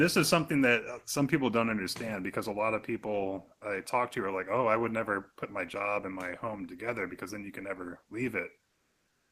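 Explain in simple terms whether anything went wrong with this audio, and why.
Near the end, from 8.67 s to 9.32 s, the real room background drops out and comfort noise in place of the background takes over: a flat, featureless hiss, slightly quieter. The sender likely paused transmission during the silence, and the receiver filled the gap with synthetic noise.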